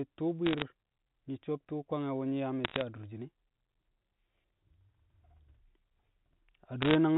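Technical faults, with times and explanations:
0.46–0.62 s, 2.64–2.82 s (between "wu̱ nyi̱ yaa" and "adurshin e̱") and 6.82–6.95 s: bit errors on a digital phone line. In each burst, roughly one bit in every 150–200 is flipped. Because the line codes every sample on its own logarithmic scale, each flip corrupts a single sample. Hits on the sign or upper bits cause sharp ticks that form a brief crackle over the speech. On a waveform these are isolated one-sample spikes. On a spectrogram they are thin vertical lines spanning the band up to 4 kHz.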